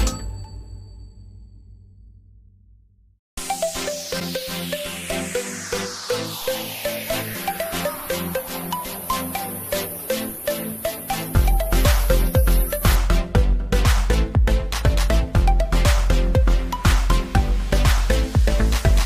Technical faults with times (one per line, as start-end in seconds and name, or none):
4.19-4.22 broken MP3 bit reservoir